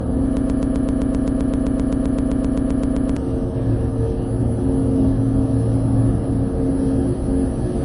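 Across the whole recording, nothing sits above 11.3 kHz, and the smeared, swirly coding artefacts of a heavily compressed MP3 are audible throughout. This is low-bitrate audio saved at a high bitrate: likely a roughly 48 kbit/s MP3 re-encoded at far higher bitrate, which cannot restore the lost detail.

From 0.37 to 3.17 s, a 130 ms fragment repeats exactly, back to back, 22 times, giving a stuttering, mechanical chatter. This broken-record loop was likely caused by a stalled player or stream resending its last buffer, and the sound meant for that span is missing.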